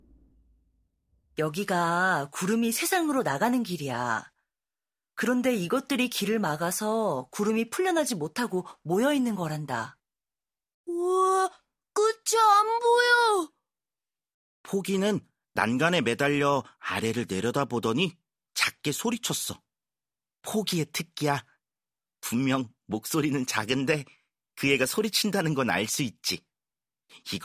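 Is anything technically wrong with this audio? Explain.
No, nothing technical stands out as wrong in this speech recording. Nothing heard in it points to a problem with how it was captured, processed or delivered.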